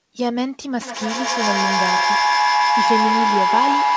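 From 0.82 s to the end, a feedback howl builds: the microphone-to-loudspeaker loop gains level each pass, so repeats swell rather than decay, narrowing to a tone around 1 kHz, with repeats roughly every 150 ms, that peaks about 4 dB above the speech.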